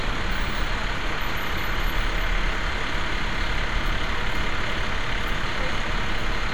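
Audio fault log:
No faults are audible anywhere in this recording.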